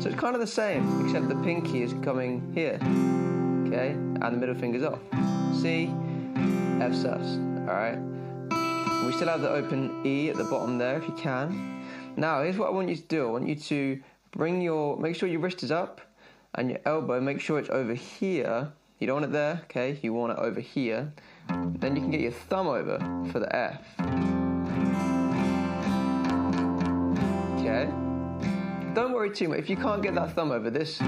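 No technical faults can be heard.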